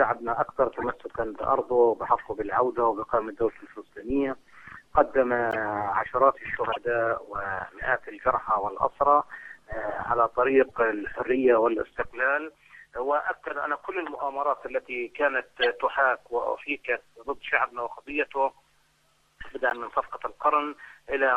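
Corrupt frames decoded at 0.79, 5.51, 6.72, 10.64, 14.17, 15.61 and 19.70 s: damaged compressed frames were played anyway, leaving brief chirps or noise bursts of a few frames each, fainter at 10.64 and 14.17 s. Unlike a dropout, misplaced energy is added instead.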